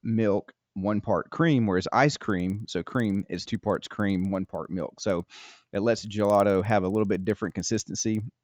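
From 2.2 s to the end of the speech, a resampler restarted on every block puts a regular tick into the signal 20 times per second. Each 50 ms block is converted separately, consistent with upsampling from 16 kHz to 48 kHz, so every block edge gets a small error from missing neighbouring samples. The ticks track the speech and drop away in pauses. A spectrogram shows thin vertical lines every 50 ms, and the waveform shows small steps at those edges.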